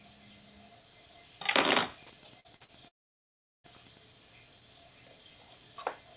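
A clip of everyday sound, carried over a call path that limits it to nothing above 4 kHz, consistent with G.711 A-law at 64 kbps. It has three distinct faults.

From 1.33 s to 4.07 s, a nearby Wi-Fi radio couples into the audio circuit, which rectifies its transmissions. This Wi-Fi interference is heard as a faint, regular ticking every 102.4 ms, roughly ten ticks a second, sitting about 35 dB below the wanted sound. Any rasp between ticks comes from data bursts riding between the beacons.

Three packets failed to reach the decoder in time, each leaving a gap of about 40 ms, at 2.40 to 2.47 s, 2.56 to 2.63 s and 2.64 to 2.71 s. The receiver bridged each gap by extending the preceding sound and then blending back into the real audio. Each short concealed packet loss comes across as a brief smear or wobble, and the two later ones nearly run together.

From 2.88 s to 3.67 s, the sound stretches into a buzz or hiss that dies away almost at once, leaving silence for most of about three-quarters of a second. 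It then picks up further on with that stretch simply gone. This is likely a long network dropout, where no packets arrived and the concealment ran out after its first few hundredths of a second.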